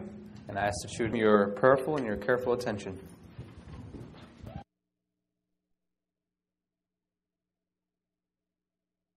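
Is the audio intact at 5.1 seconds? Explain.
Yes, the audio at 5.1 seconds is intact, with no dropout, click, distortion or other fault at that point.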